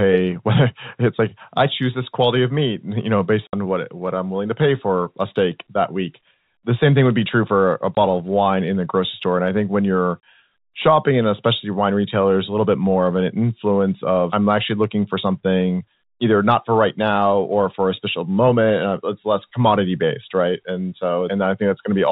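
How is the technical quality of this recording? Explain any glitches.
The speech has three short dropouts from packet loss filled with silence. At 3.47 s, between "meat you know based" and "what what I'm willing", about 60 ms vanishes. At 7.95 s, after "be true for a", 20 ms is gone. At 10.2 s, before "shopping and especially wine", 30 ms is missing. Lost packets were replaced with digital silence, which fits 10 ms packets, so each hole cuts off hard at its edges. The audio runs over a G.711 telephone link, so everything sits below 4 kHz.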